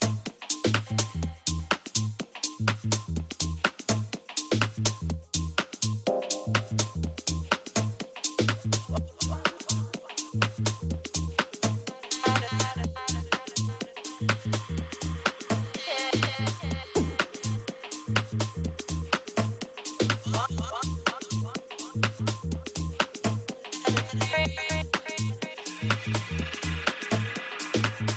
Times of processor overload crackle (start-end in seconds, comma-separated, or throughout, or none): none